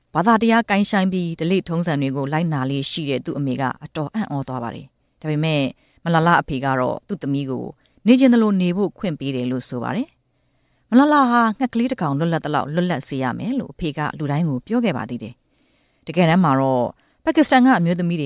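No technical faults can be heard anywhere in the audio. There are no interruptions or disturbances to point to at any moment.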